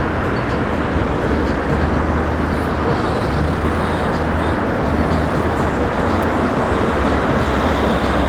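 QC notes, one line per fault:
3.13–3.65 s, jitter buffer speed-up: the receiver trimmed repeated pitch-period slices, about a fifth of a second in total, so the sound runs 142% fast at unchanged pitch.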